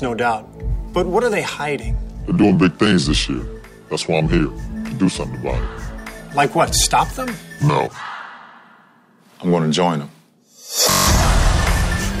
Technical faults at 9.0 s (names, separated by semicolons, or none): none